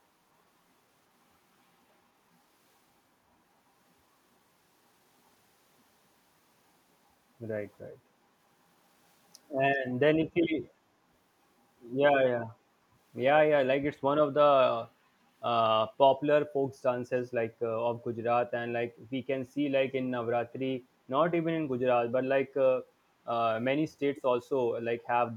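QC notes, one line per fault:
24.16–24.22 s, echo leak: a brief, faint copy of the speech returns about 394 ms late, well below the main level, likely from a far-end speakerphone whose echo canceller let a scrap through; unlike room reverb, it is a discrete delayed repeat, not a smooth decaying tail.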